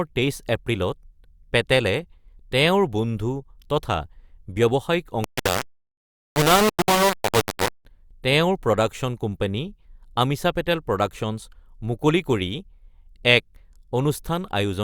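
Low bit depth without dither affects the speech from 5.24 to 7.85 s. The sound turns coarse and grainy, with a harsh distortion that tracks each syllable and sits nearly as loud as the speech itself. The likely cause is that the signal was rounded to very few levels with no dither, which fits 3-bit quantisation. Because nothing randomises the rounding, the error follows the waveform instead of spreading into a steady hiss.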